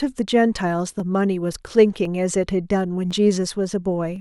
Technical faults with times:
1.00-4.16 clock drift buffer slips

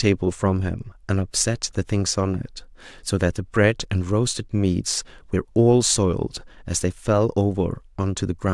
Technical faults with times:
none

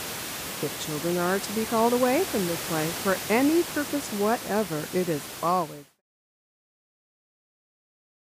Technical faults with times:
none

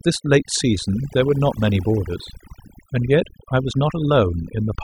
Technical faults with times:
0.00-4.84 overdone noise removal

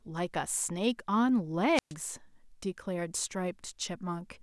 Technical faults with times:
1.74-1.93 wireless microphone squelch dropout

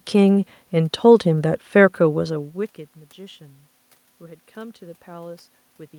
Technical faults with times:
none

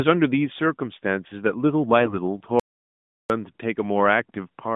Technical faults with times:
2.00-2.15 AMR bit errors
2.60-3.30 audio dropout to silence

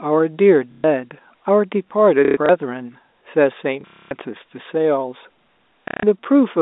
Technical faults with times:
0.72-0.84 packet loss with last packet repeated
2.25-2.49 packet loss with last packet repeated
3.81-4.11 packet loss with last packet repeated
5.88-6.03 packet loss with last packet repeated

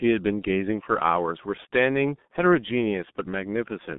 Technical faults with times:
0.00-3.98 G.723.1 codec

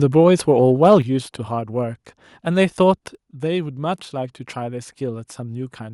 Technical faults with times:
0.92 microphone overload
1.02 microphone volume stepped down
3.15 microphone volume stepped down

